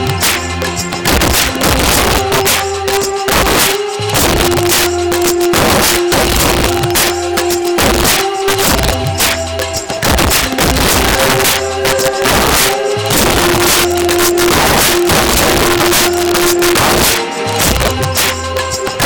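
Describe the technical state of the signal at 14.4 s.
At 14.4 s, as throughout, integer overflow: peaks driven about 9 dB too hot wrap to the opposite sign on roughly 7 percent of samples, giving sharp cracks harsher than clipping's flattened distortion.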